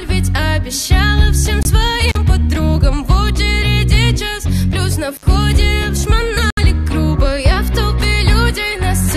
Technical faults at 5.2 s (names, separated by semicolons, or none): intermittent contact